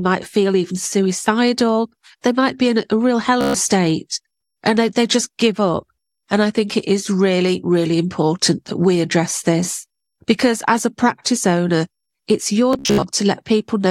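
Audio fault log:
3.41–3.54 s, Bluetooth stutter: about 130 ms of speech drops out and the receiver, with no fresh data arriving, keeps replaying its last short slice. The repeats run together into a brief machine-gun buzz, and the speech then resumes further on, as though it had played through the gap.
12.73–13.03 s, Bluetooth stutter: a scattered burst of late or lost radio packets. About 203 ms goes missing over roughly 290 ms, the longest unbroken run being about 73 ms. The last slice received before each hole is replayed to fill it, so the speech stutters in several bursts before it picks up again further along.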